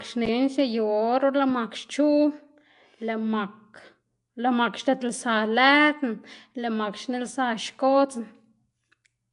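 Speech, with Nellymoser compression damage audible from start to finish. A rough, hissy halo surrounds the voice, and it sounds smeared and underwater. Nothing sounds above about 10.6 kHz. The likely cause is Flash's Nellymoser Asao codec, which starves weak bands and fills them with noise. The damage points to a bitrate near 44 kbps.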